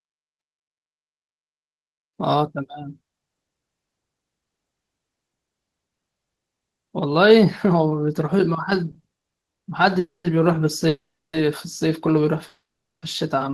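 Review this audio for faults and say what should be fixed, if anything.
There's a stretch of repeated stalls (stutter) from 8.91 to 9.67 s. Eight short hold-ups land in that span, the longest about 130 ms, adding up to around 300 ms of filled-in sound, so nearly 40% of the stretch is concealment. Packets were arriving slower than they played out, so the jitter buffer kept running dry and the receiver stretched the last bit of sound each time. Nothing's lost, but it drags and stutters. An adaptive jitter buffer with a bit more headroom would ride this out.

Then come three call audio freezes, each getting longer. The first runs 9.99 to 10.26 s, a 250 ms gap with about 170 ms of it gone silent. The second runs 10.88 to 11.35 s, 450 ms with roughly 350 ms silent. The last runs 12.47 to 13.04 s, 550 ms with about 450 ms silent. Each time the last sound carries on, fades to nothing, and then the audio resumes right where it stopped, so nothing's missing but gaps get pushed in. 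The likely cause is packets held up in transit, with the delay jumping by the length of each freeze. Fixing the network path's queuing, or prioritising the voice traffic, is the real cure.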